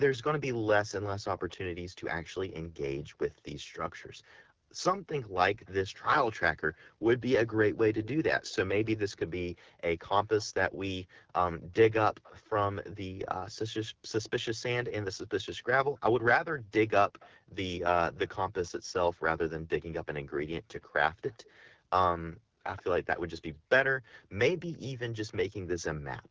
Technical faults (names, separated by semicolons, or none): AMR wideband (HD Voice) codec; echo leak